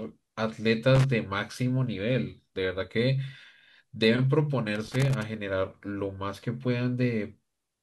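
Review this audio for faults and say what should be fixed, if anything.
A worn or dirty contact in the signal path is making and breaking as the connector shifts, so the speech is chopped into fragments and any DC on the line turns each break into a pop. The result is loose connector crackle: an irregular burst of scratching from 0.95 to 1.04 s, and a longer one from 4.75 to 5.23 s. Cleaning or replacing the connector and securing the cable against movement should prevent it.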